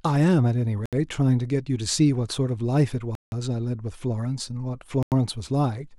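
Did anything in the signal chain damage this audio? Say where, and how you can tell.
Yes. The speech drops to dead silence three times, at 0.86 to 0.93 s, 3.15 to 3.32 s and 5.03 to 5.12 s, gaps of roughly 70, 170 and 90 ms, then carries on. That's likely a Bluetooth stall: the wireless link held up packets and the headphone buffer ran dry until they arrived.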